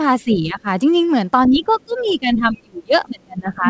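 From 0.22 to 0.67 s the talker's speech dips by roughly 15 dB, over about 0.4 s in total. This is speech suppressed in double talk, likely from an echo canceller. Both ends were talking at once. The canceller could not tell the near voice from loudspeaker echo, so it turned the microphone down. At 1.49 s it happens again, harder, and lasts to the end of the clip. The voice drops by up to roughly 30 dB.

From 2.07 to 2.12 s, inside that second stretch, a brief scrap of the other side's voice leaks through. It sits around 35 dB below the talker, so it is faint. The canceller likely failed to remove all of the loudspeaker sound from the microphone. Throughout, nothing is heard above 8 kHz, which points to a wideband call codec such as G.722.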